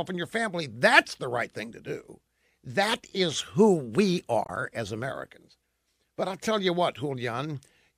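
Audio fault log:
4.44–4.50 s, damaged data in a compressed stream: just after "is who we", corrupt bytes make the decoder misread those frames and lose sync while it hunts for the next valid frame header, leaving a roughly 50 ms blip in the speech.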